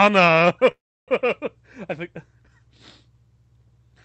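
Speech over a call link whose codec cuts the highs above 8 kHz. At 0.71 s there is a call audio freeze until 1.10 s. A short tail continuing the last sound fades to near silence for about 0.32 s. Speech then resumes where it stopped, with nothing lost. Delayed packets likely emptied the jitter buffer.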